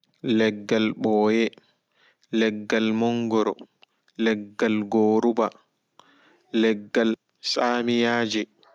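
A short speech recording with no technical fault to be heard anywhere in it. There is nothing here that calls for a time or a cause.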